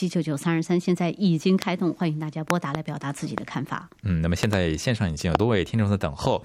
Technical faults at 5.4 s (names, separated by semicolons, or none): loud pop